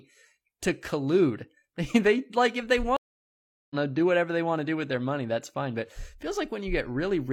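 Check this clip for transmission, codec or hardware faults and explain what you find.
One transmission fault. From 2.97 to 3.75 s, after "like if they", the speech drops out for about 0.74 s and resumes at "know do whatever they", roughly 0.7 s further on. This is a stream reconnect: the connection broke, the player restarted decoding mid-stream, and the live audio it picked up had moved on.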